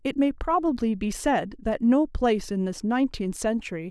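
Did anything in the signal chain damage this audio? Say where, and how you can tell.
No, nothing in this speech recording stood out on listening as damage from any stage of the signal chain.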